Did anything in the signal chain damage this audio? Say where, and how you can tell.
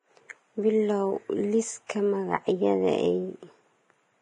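Yes. Throughout, the speech sounds hissy and grainy, with nothing above 10.6 kHz. The likely cause is heavy Vorbis compression at a low bitrate, which coarsely quantises the treble into noise.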